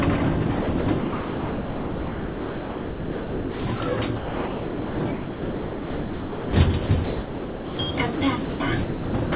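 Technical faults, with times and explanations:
0.62–3.80 s, 4.16–6.53 s, 6.86–7.79 s and 8.15–9.32 s, sound chopped by the voice detector: the sender likely kept gating transmission, so about 2.8, 2.3, 0.8 and 0.6 s were swapped for comfort noise. The quieter parts drop out choppily over narrowband, 4 kHz-limited audio.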